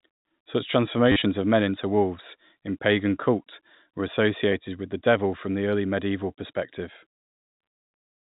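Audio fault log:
1.12–1.22 s, packet loss with last packet repeated: just before "of men into wolves", about 70 ms of audio goes missing in short runs scattered across 100 ms, the longest lasting 40 ms. Each gap is filled by looping the previous packet, and the loops don't align with the pitch, so the 40 ms run briefly buzzes. The loop rate points to roughly 10 ms packets, giving a short robotic stutter over the telephone-band audio.
4.52 s, packet loss with last packet repeated: between "in pagan cult were" and "with the devil from", a single packet of about 10 ms is replaced by a repeat of the one before it, which leaves one small blip.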